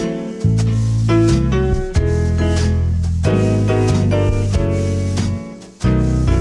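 No technical faults can be heard anywhere in the audio, and the signal stays steady and intact throughout.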